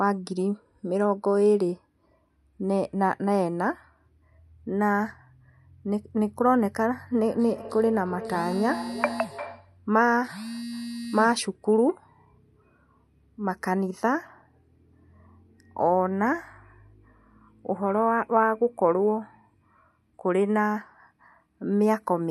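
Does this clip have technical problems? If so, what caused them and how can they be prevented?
Yes. From 7.27 to 9.79 s there is feedback echo between two devices. A second device on the call replays the speech, and this microphone picks it up again, beyond the reach of its own echo canceller. The speech repeats at roughly 0.4 s intervals, peaking about 13 dB below the speech. On a spectrogram these appear as fainter, evenly spaced copies of each syllable. To prevent it, join the call from only one device per room, or mute the microphone and speaker on the extra one.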